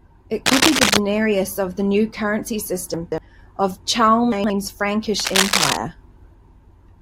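Speech with two kinds of fault. From 0.46 to 0.97 s a harsh scratching rustle sits over the speech, louder than it, and from 5.19 to 5.77 s it returns at roughly the speech's level. This cable scratch noise is likely a worn cable or connector being moved. From 2.94 to 3.18 s and from 4.32 to 4.50 s the speech turns briefly jumbled. These are chunks out of order: a 60 ms piece plays three chunks late the first time and two chunks late the second.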